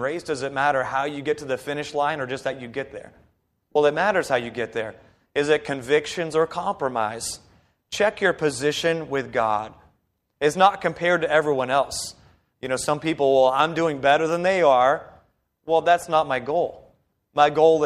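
Lost LE Audio frames interrupt the speech at 3.72 to 3.76 s and again at 16.02 s. The decoder fills each gap by repeating the last spectrum with random signs. The first gap lasts about 37.5 ms, which fits five 7.5 ms frames, and comes out as a short noisy smear. The second is a single brief blip. The faint grainy edge throughout is likely the light LC3 compression of the Bluetooth link.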